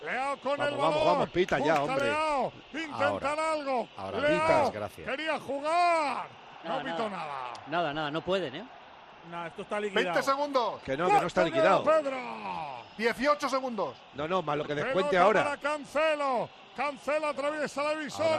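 Brief garbled flutters are heard at 0.99–1.04 s, 14.62–14.70 s and 17.71–17.76 s. These are frames out of order: two adjacent runs of decoded audio play swapped, consistent with 20 ms blocks (30 ms in the middle event), with no time lost.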